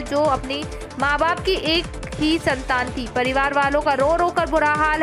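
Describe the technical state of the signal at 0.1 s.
At 0.1 s the signal is intact, with no dropout, distortion or other fault to be heard.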